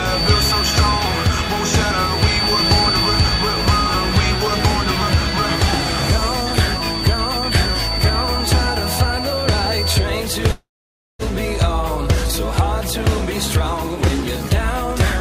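There's a thin, steady whistle at about 4.6 kHz sitting just a few dB under the sound from the start to about 10.1 s, swelling and fading slowly in level without ever building up. That's a feedback whistle. The likely cause is the loudspeaker-to-microphone loop hovering right at the edge of feedback, so that one frequency keeps ringing on its own instead of running away into a howl. Then from 10.51 to 11.22 s there's a call audio freeze. The last bit of sound gets stretched into a fading buzz that drops to near silence for roughly half a second, and then the audio picks up exactly where it stopped. It likely comes from packets stalling in transit and the jitter buffer running dry, with the receiver filling about 678 ms while it waited. Nothing is lost, but everything after the freeze now runs about 0.68 s late.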